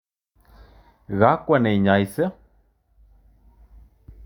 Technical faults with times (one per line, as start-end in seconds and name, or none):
none